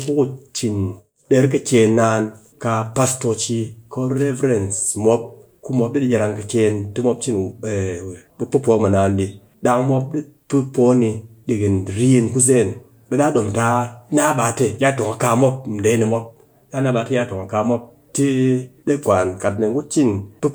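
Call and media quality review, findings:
No faults found in the speech recording. Nothing to log against any component.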